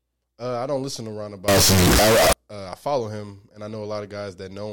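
From 1.48 to 2.33 s, a float read as integer fault: the speech was likely stored as 32-bit float but read as 32-bit integer, so sign and exponent bits set each sample's level. The waveform turns nearly square at an almost fixed, high level, very loud and harsh, with background noise as loud as speech, though pitch can still be followed.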